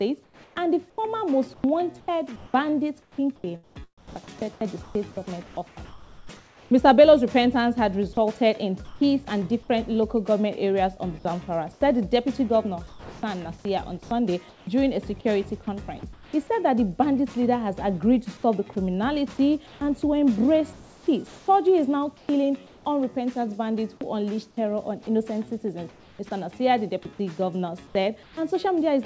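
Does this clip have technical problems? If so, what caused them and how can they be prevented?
Yes. Sound chopped by the voice detector, 0.24 to 6.71 s and 11.73 to 14.67 s: the sender's voice detector likely toggled transmission on and off repeatedly, replacing about 2.5 s and 0.7 s with synthetic noise. The result is choppy sound. Prevention: lengthen the detector's hangover time or lower its threshold.

Comfort noise in place of the background, at 8.85 to 9.01 s, 15.99 to 16.33 s, 19.67 to 22.85 s, 25.89 to 26.19 s and 27.87 to 28.37 s: the sender likely paused transmission and the receiver generated shaped noise. The real background gives way to a flat, featureless hiss, about 2 dB louder at 8.85 s and about 4 dB quieter at 25.89 s. Prevention: disable discontinuous transmission where the background matters.

Sound dropped by the voice detector, 15.99 to 16.03 s: the detector likely mistook low-level sound for background and stopped sending. 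About 30 ms of sound vanishes into comfort noise before returning. This happens over the G.722 call path, which has nothing above 8 kHz. Prevention: tune detector sensitivity so quiet onsets and endings still trigger transmission.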